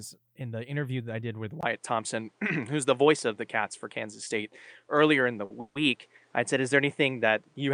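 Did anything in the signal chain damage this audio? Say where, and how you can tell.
Yes. Input switched to a poorer device, from 1.61 s to the end: this is a capture-stage problem at the driver or device level. A gap of about 20 ms marks the change. After it, the speech loses everything above 9.8 kHz, the level shifts by around 5 dB, and a new noise floor roughly 40 dB under the signal appears. The most likely cause is the system moving its input to a narrower-band microphone or a headset call profile, which has its own tone and hiss.

Short stall from a late packet, 5.45 to 5.52 s: this happens at the network and jitter-buffer stage. A packet arrived about 50 ms late. The receiver held the last sound for that 50 ms, so a sound is held too long, and then playback resumes from the same point. Nothing is lost, but the timing is stretched.

Call audio freeze, 5.60 to 5.77 s: this also happens at the network stage. 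About 150 ms of audio is filled in. The last sound carries on as a buzz or hiss that fades without dropping to true silence, and then the speech picks up exactly where it stopped. It is likely caused by packets being held up long enough to empty the jitter buffer, which inserts a delay without removing any content.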